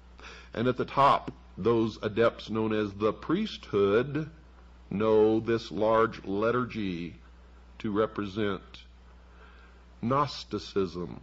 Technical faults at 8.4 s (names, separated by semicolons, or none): none